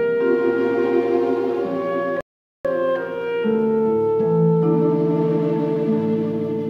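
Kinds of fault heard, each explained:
Playback stall: the sound cuts out in mid-flow at 2.21 s and stays silent for about 440 ms, until 2.65 s, before carrying on. This is likely the player running short of data or having its output thread held up, so nothing reached the output until it recovered. On a waveform it appears as a flat line of silence cutting abruptly into the signal. On a spectrogram it is a blank vertical band across all frequencies, with sharp edges on both sides.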